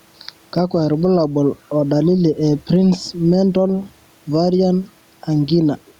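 All the way through this speech clip there's gain pumping. The level keeps breathing, with a swing of around 5 dB. That's most likely the input gain sitting way too hot, with a fast limiter or compressor clamping down on every loud syllable. It squashes the dynamics, and the room noise sits about 44 dB under the speech.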